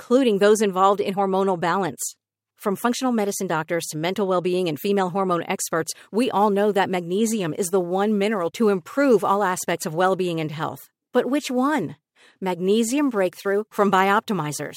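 Sample clock jitter runs from 5.92 s, right after "and female hormone experts", to the end. The converter clock wanders by a few microseconds, so the speech is sampled at slightly wrong moments. Steep, bright sounds produce a rough hiss around 30 dB below the signal, which disappears in pauses.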